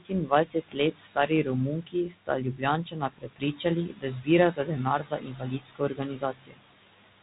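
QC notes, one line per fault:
Throughout, noise suppressor artifacts: the suppressor pulls the room noise, which sits about 14 dB under the speech, down by about 18 dB frame by frame. The background drops out between phrases and creeps back under them, over the narrow telephone-band sound.
0.00–1.47, 1.81–2.63, 2.84–3.65, 3.87–4.28, 4.53–4.79 and 4.99–6.60 s, speech cut by the noise suppressor: quiet bits of speech get mistaken for noise and ducked along with it, by about 13 to 19 dB at the deepest points. Soft consonants and word endings come out swallowed. The last run is the worst, with roughly a second of speech affected.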